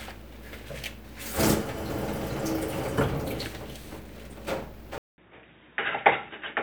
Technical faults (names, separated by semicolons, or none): input switched to a poorer device